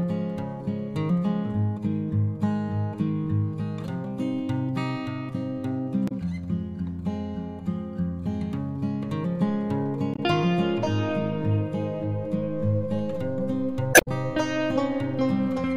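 Around 6.08 s there's a short glitch, about 40 ms, that's damaged data in the compressed stream: the decoder hits bad bytes, misreads the frames and has to resync on the next header. It happens again at 10.14 s for about 56 ms, then a longer burst from 13.91 to 14.08 s. That last one leaves the timeline roughly 46 ms longer, so things after it land a touch late.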